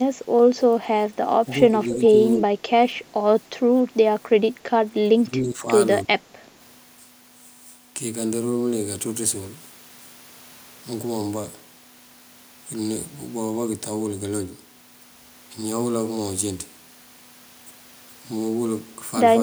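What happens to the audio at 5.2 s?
The speech dips by roughly 10 dB from 5.14 to 5.68 s, likely speech suppressed in double talk: an echo canceller mistaking overlapping far-end sound for echo and pulling the talker down. The waveform envelope sags there, and the spectrogram thins.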